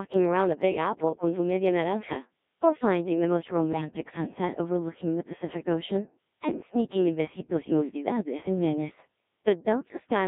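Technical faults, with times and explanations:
Throughout, Codec 2 vocoder: the speech sounds robotic and buzzy because it's rebuilt from sine waves rather than the real waveform, and damage this heavy fits roughly 1.3 kbit/s.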